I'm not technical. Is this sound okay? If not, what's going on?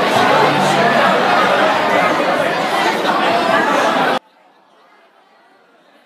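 No. A likely case of one channel inverted, from about 4.18 s to the end: the sound drops almost to nothing. When the two stereo sides are combined and one is flipped upside down, their shared content cancels out, leaving only a faint trace.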